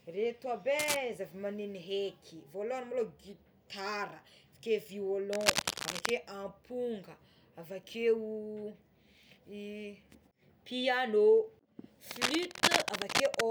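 Scratchy, rustling bursts of noise break over the speech three times: briefly from 0.79 to 0.97 s, again from 5.33 to 6.11 s, and for longest from 12.05 to 13.41 s. Each burst is dense and uneven, roughly as loud as the speech itself. This is cable scratch noise, likely from a worn cable, connector or control being moved, so that its contact resistance fluctuated rapidly and added that crackling texture to the signal.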